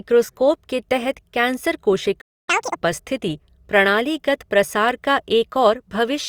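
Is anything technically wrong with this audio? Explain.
Yes. A playback stall occurs at 2.21 s, just after "के तहत कैंसर": the speech cuts to silence for about 0.27 s, likely because the player's buffer ran dry or its thread was blocked.

Catch-up at higher speed follows from 2.49 to 2.76 s: the player resamples its backlog at 2x speed, raising the pitch by roughly ten semitones, before returning to normal at "उपस्थिति प्रणालीगत प्रसार का".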